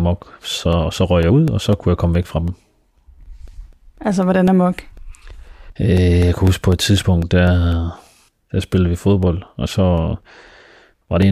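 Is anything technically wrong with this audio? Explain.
Yes. Periodic USB or driver dropouts run from 0.23 to 11.23 s. Four times a second, something briefly blocks the audio path and about a millisecond of speech becomes silence, leaving evenly spaced ticks. Their strict regularity, audible only while speech sounds, distinguishes them from random clicks.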